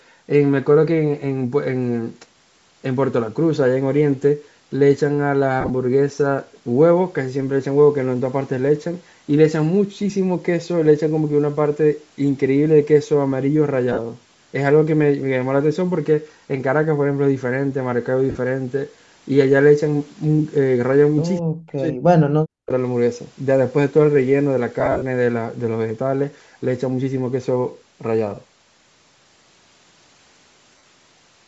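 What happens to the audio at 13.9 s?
Lost LE Audio frames run from 13.92 to 13.99 s. About 52.5 ms of audio, consistent with seven 7.5 ms frames, went missing within a 60 ms stretch, the longest unbroken run being around 50 ms. The decoder filled each gap by repeating the last spectrum with scrambled signs, so the speech briefly smears into a grainy, noisy hiss. A plain dropout would fall silent instead.

Under this, as across the whole clip, runs Bluetooth LC3 compression, likely at 48 kbps with 7.5 ms frames. Its plainly audible breathy, granular edge on the voice comes from the upper spectrum being zeroed and refilled with noise. This differs from simple band-limiting, which removes the top cleanly. The band itself stops at 8 kHz, as expected from the call's microphone processing.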